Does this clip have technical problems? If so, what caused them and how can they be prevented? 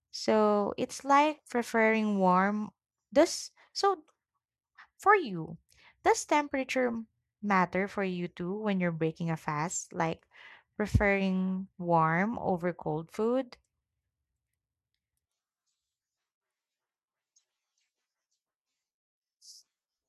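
No, nothing stood out as a technical problem on listening to this speech recording, so there is nothing to trace back or prevent.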